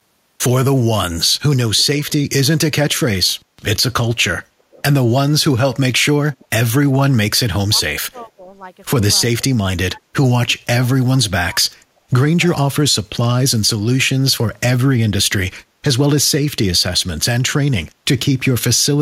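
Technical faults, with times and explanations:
1.77–2.13 s, 4.71–4.82 s, 6.34–6.45 s and 7.78–8.01 s, echo leak: faint scraps of speech repeat 335 ms late, about 25 to 30 dB below the main voice. On a spectrogram, a dim copy of the harmonic pattern trails the original. This is likely an echo canceller at a loudspeaker end letting residue through.
7.69–8.52 s, 9.52–11.94 s and 12.91–13.07 s, speech suppressed in double talk: the voice dips by roughly 10 to 20 dB in patches while the other side talks. The waveform shows sudden notches in the envelope, likely from an echo canceller turning down both talkers.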